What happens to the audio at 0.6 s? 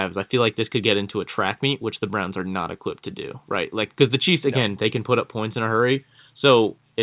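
Nothing goes wrong at 0.6 s: the speech passes through intact, carried by the narrowband call path that leaves nothing above 4 kHz.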